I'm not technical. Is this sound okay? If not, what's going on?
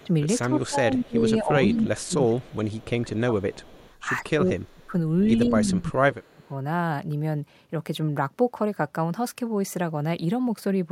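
No. On the far end of this call, someone is likely using a loudspeaker, and their equipment failed to fully remove the sound its microphone picked back up. That leftover gets returned as an echo leak: a faint, delayed copy of the speech arriving just under a fifth of a second late. You can hear it at the very start, around 0.67 to 1.06 seconds, 1.99 to 2.85, 3.63 to 3.93, and very faintly at 4.63 to 4.86.

The same equipment also mishandles moments when both sides talk at once. Likely unable to tell the local talker apart from the echo, it turns everything down. This is speech suppressed in double talk. From 0.04 to 3.64 seconds the speech keeps dipping, for about two seconds in total. From 4.22 to 6.44 it happens again, for about a second and a half, and the drops are deeper, making the speech sound like it's briefly fading out.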